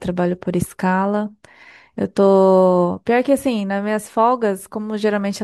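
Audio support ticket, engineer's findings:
No fault found in the speech clip; no symptom to trace to any component.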